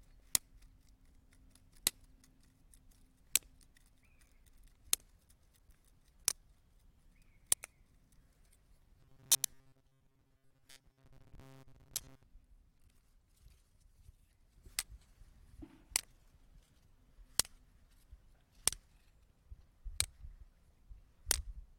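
A recording of everyday sounds, it flutters briefly at 0.39, 7.55, 9.25, 11.18, 12.85, 14.68, 17.68 and 19.27 s. These are frames out of order: adjacent blocks of about 23 to 93 ms play swapped. From 9.0 to 12.2 s the sound turns into a stiff metallic buzz at 134 Hz, robotic sound likely from repeating a roughly 7.5 ms buffer while most of the real audio is skipped.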